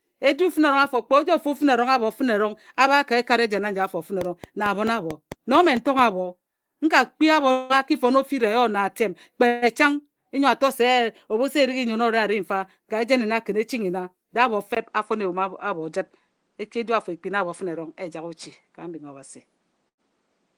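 Speech, carrying four kinds of fault. From 4.21 to 6.00 s a train of clicks ticks over the sound at a steady 4.5 per second, about ten in all. They are near-identical pulses standing well above the speech and continuing through pauses, which separates them from random crackle or from clipping tied to loud syllables. The likely source is electrical interference or a faulty connection or power supply. At 7.51 s a long network dropout begins, lasting to 7.73 s. The receiver fills about 182 ms by continuing the last sound as a fading buzz, and 160 ms of the speech never returns. The audio resumes further on with a slight timing shift, and no stretch of pure silence is reached. That places it at the short end for this fault, and it most likely comes from a stall in delivery. At 9.47 to 9.65 s there is a burst of packet loss. A held, fading tone covers 146 ms, 120 ms of speech is missing, and timing shifts by 26 ms. 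A second burst at 19.88 to 20.11 s fills 92 ms over an 80 ms gap, and a further 14 ms is cut out. Neither hints at a longer outage. At 14.75 s, after a 20 ms silence, the input switched to a poorer device, likely a different microphone or a headset call profile. From there to the end nothing is present above 10.1 kHz, the level steps by a few decibels, and a faint new noise floor appears far below the speech. The change is abrupt and persists, unlike a gradual filter or the brief gaps above.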